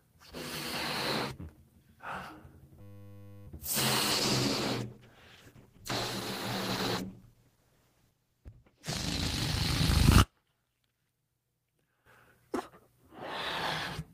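From 2.81 to 3.47 s the sound freezes into a steady 100 Hz buzz. This is a system hang loop: the sound hardware kept replaying one 10 ms buffer while the system stalled.

From 4.13 to 9.37 s the audio turns rough, watery and muffled. This is a call bitrate drop from 32 to 13 kbps, which coarsened the coding and trimmed the high frequencies.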